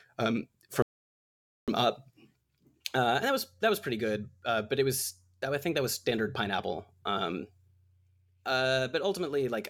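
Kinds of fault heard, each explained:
Playback stall: At 0.82 s the speech stops mid-flow and stays silent until 1.68 s, a gap of about 850 ms. The player likely ran out of data or had its thread blocked. The speech then resumes after the silence.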